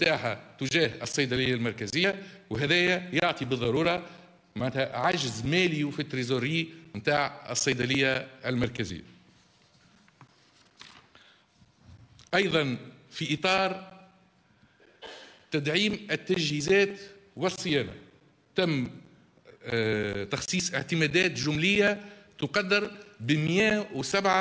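A resampler restarted on every block runs through the whole clip, from start to finish. The converter, which fits a change from 24 kHz to 16 kHz, handles each 10 ms block in isolation, so at every block boundary it lacks the true neighbouring samples and leaves a small error. With blocks this short, the errors merge into a steady buzz at 100 Hz that rides on the audio and drops away whenever the signal does.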